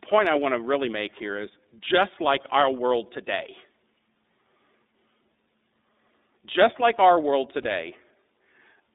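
From the start, the speech carries the iLBC codec's narrowband sound. It is band-limited to roughly 250 Hz to 3.7 kHz, slightly rough and synthetic, which fits the 13.33 kbps, 30 ms frame mode. At 7.62 s, just after "just like our world", lost iLBC frames leave a brief buzzy held-vowel concealment lasting until 7.66 s. That points to a single missing 30 ms frame, and the voice recovers immediately afterward.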